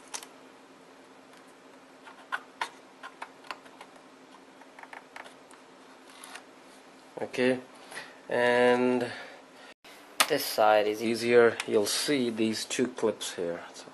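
A playback stall at 9.73 s cuts the sound to silence for 120 ms, likely because the player ran short of data or its thread was held up.

Catch-up at higher speed follows from 9.85 to 11.05 s: the backlog plays 1.1 times fast, pitch raised about one and a half semitones, before returning to normal.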